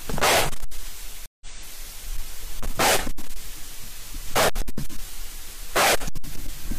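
From 0.10 to 0.79 s, hard clipping overdrives the sound by about 36 dB. Peaks are cut flat into harsh fuzz. At 1.26 s a stream reconnect drops 152 ms of silence. Playback resumes 171 ms earlier, repeating a moment. More hard clipping follows: a light crackle at 2.17 to 2.21 s, about 3 dB over, then heavy fuzz at 2.60 to 3.36 s, 4.29 to 5.00 s and 5.76 to 6.74 s, about 35, 29 and 39 dB over.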